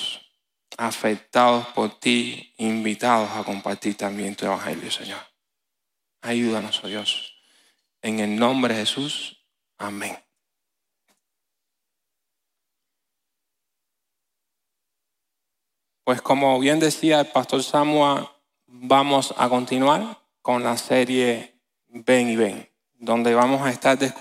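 A repeated buffer at 9.93 to 9.97 s: one 10 ms slice replays four extra times, giving a brief 100 Hz buzz while the audio stalls, without any audio lost.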